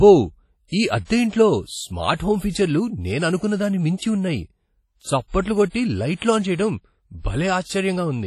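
Right from the start the speech has a ringing, washy quality, with a hiss that swells and fades along with the talking and nothing above 14.5 kHz. That's heavy damage from likely WMA compression, and the smearing points to a low bitrate around 32 kbps.

At 0.68 s there's a pre-echo. A short hiss creeps in about 45 ms ahead of a sharp attack at 0.72 s. The codec spread the noise meant for the loud onset across the quiet gap before it, so the attack comes out soft and blurred.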